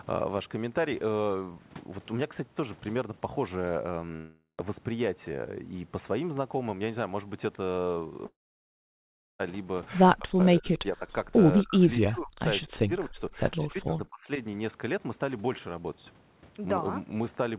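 At 4.16 s the sound breaks off for about 0.44 s. The gap is first filled with a fading continuation of the last bit of audio, then goes quiet for roughly the final 0.12 s before the sound picks up again further on, with that stretch simply gone. The same thing happens at 8.26 s, lasting about 1.15 s, but this time the filler gives out quickly and you're left with about a second of silence until 9.41 s. Both gaps sound like a long network dropout, likely packets that never arrived, so the receiver concealed what it could and then had nothing left to play.

From 10.18 s to 14.39 s the speech keeps getting pushed down in chunks: 10.18–10.40 s, 10.59–11.05 s, 11.63–12.42 s, 12.66–13.39 s and 13.69–14.39 s. The first three dip by around 40 dB at their deepest and the last two by around 25 to 30 dB, so the voice nearly vanishes in places. That pattern points to speech suppressed in double talk, likely an echo canceller mistaking the talker for loudspeaker echo while the far end was also playing, and ducking both together. 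All of this sits on a G.711 mu-law call path, so nothing comes through above 4 kHz.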